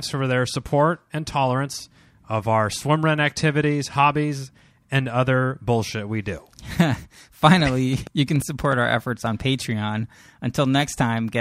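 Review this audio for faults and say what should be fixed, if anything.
A train of clicks runs from 7.53 s to 8.74 s, ending just before "our efforts on". Around ten near-identical pulses arrive at an uneven pace averaging 6.7 per second, peaking a few dB above the speech and sitting on top of it as a distinct ticking. The likely cause is electrical interference from nearby equipment or a faulty connection or power supply. Isolate the recording chain from noisy equipment and check cabling and interface stability.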